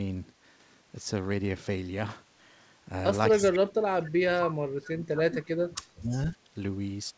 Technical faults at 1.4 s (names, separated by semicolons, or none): none